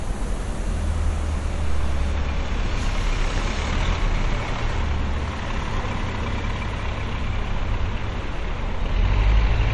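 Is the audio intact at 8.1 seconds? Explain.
No. At 8.1 s, as across the whole clip, there is plainly audible MP3 compression damage, likely from a starved encoder. Nothing sounds above 11.3 kHz. That cut suggests a low bitrate near 48 kbps. Weak detail is dropped frame by frame, leaving a dull, watery sound.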